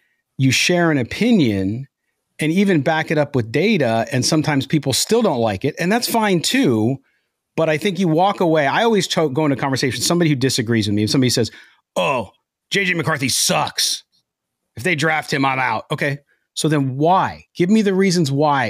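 From 0.22 s to 18.68 s, clock slip clicks run through the speech. They arrive about seven times a second as a soft, regular rattle. Two unsynchronised clocks likely differ by roughly 150 ppm. Single samples are dropped or repeated each time.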